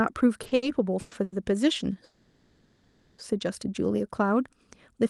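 Between 0.43 and 0.64 s the speech hitches three times in quick succession, at 0.43 to 0.47, 0.47 to 0.53 and 0.55 to 0.64 s, with a fourth at 1.23 to 1.34 s. Each is a short stall from a late packet. A packet missed its slot, the jitter buffer emptied, and the receiver held the last sound for 20 to 90 ms before picking up exactly where it left off. Nothing is skipped. The hold adds a faint buzzy smear, not a cut or jump.

From 1.00 to 1.13 s, and much longer from 2.04 to 3.20 s, the sound turns into a fading buzz that sustains without ever reaching true silence. This is a call audio freeze, likely from packets held up in transit. The second one stretches over a second before the audio resumes. What separates these from the brief stalls is length: over 100 ms, long enough for the held sound to visibly decay. Throughout, the audio carries the band limit near 12 kHz that fits an Opus call path.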